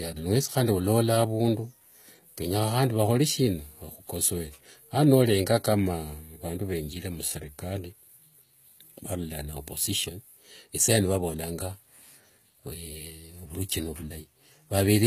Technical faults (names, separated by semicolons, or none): HE-AAC compression